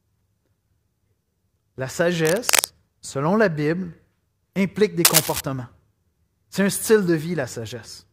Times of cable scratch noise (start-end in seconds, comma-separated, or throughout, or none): 2.20-2.68, 5.05-5.41